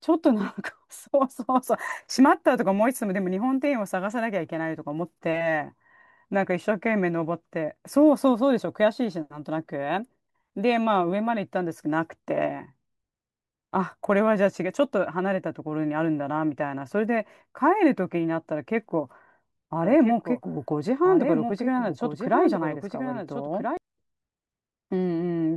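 From 19.83 to 23.77 s, a doubled audio track: a copy trails about one and a half seconds behind, around 5 dB quieter, likely from a second, slower capture path.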